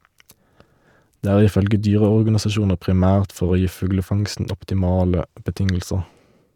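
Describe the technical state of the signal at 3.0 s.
Around 3.0 s the speech plays through intact, with no dropout, click, distortion or other technical fault at that moment.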